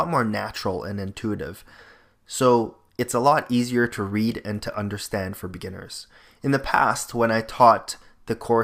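Nothing stood out as a technical fault on listening to this recording.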